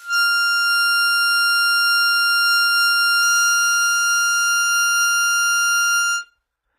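HE-AAC compression is the likely cause of the damage heard from start to finish. The treble is bright but synthetic: the coder keeps only the lower spectrum and fills the top by copying lower bands upward under a coarse envelope, so upper harmonics no longer line up with the fundamentals beneath them. High detail sounds gritty and metallic, nothing reaches above 14.9 kHz, and the plainly audible damage fits a very low bitrate of around 20 kbps.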